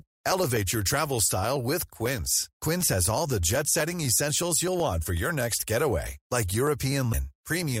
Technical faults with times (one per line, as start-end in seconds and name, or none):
7.12-7.14 broken MP3 bit reservoir